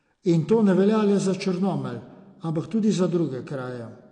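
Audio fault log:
Throughout: AAC compression. The speech sounds dull, with nothing above 9.8 kHz, and has a plainly audible smeared, warbling texture on sibilants and held sounds. The likely cause is AAC-LC coding at a low bitrate, which fits 32 kbps, lowering the cut-off and thinning the coded spectrum.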